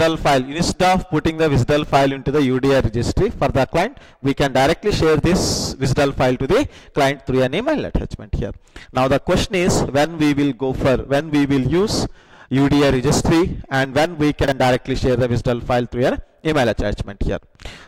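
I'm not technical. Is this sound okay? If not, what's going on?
No. Twice, around 1.84 to 1.92 seconds and again around 14.44 to 14.52 seconds, the system played chunks out of order. A 40-millisecond slice of audio arrived late and was played one slice after where it belonged, swapping it with its neighbour. Nothing goes missing, but for that instant the sound is briefly jumbled.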